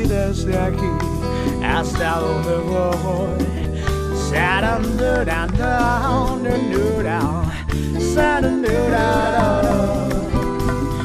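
From 8.88 s to the end there's a doubled audio track: a second, full-band copy of the audio kicks in abruptly and trails the original by roughly a third of a second, sitting a few decibels quieter. There's no decay or room colour on it, so it reads as a clean slapback rather than an echo. The likely cause is the same signal being picked up again through a slower path, or an edit that left two out-of-step copies stacked.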